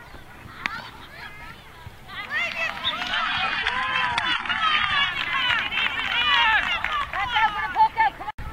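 At 3.12 s the audio abruptly drops to a lower-bitrate version of the adaptive stream, and nothing above 11.1 kHz survives. The thin treble and swirly artefacts fit a switch to a very low-bitrate HE-AAC encode, and it snaps back at 5.12 s without a gap.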